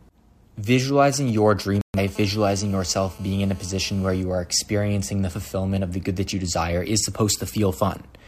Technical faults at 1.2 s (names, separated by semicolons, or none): GSM signalling bursts